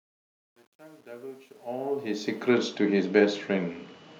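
From the start to 2.52 s the speech fades in gritty rather than clean, worst up to 1.8 s. This is truncation distortion on a fade: the gain stage kept too few bits, consistent with about 10-bit resolution, without dither.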